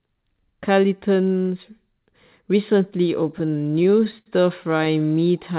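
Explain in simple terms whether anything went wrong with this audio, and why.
Packets arrived late, so the receiver's jitter buffer kept running dry from 3.32 to 4.28 s and 4.64 to 5.41 s. These repeated stalls (stutter) were covered by stretching the last sound, up to 73 ms at once. Nothing is lost, but the speech drags and hiccups.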